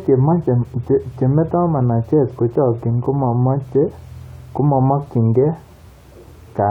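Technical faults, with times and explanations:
Nothing in the recording stood out as a technical problem on listening.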